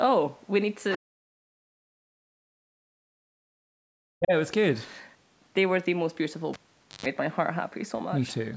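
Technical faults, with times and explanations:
0.91–0.96 s, other side's voice leaking through: a brief scrap of a second voice about 20 dB down, likely residual echo, a faint separate harmonic trace on the spectrogram.
0.96–2.65 s and 2.9–4.33 s, speech suppressed in double talk: the voice dips by around 40 dB, likely the echo canceller muting both sides, leaving gouged gaps in the waveform.
6.53–7.06 s, cable pulled and plugged in: a pop, about 0.48 s of near silence ending in a 0.13 s burst of 50 Hz buzz, and a second pop, seen as spikes with low harmonic stripes.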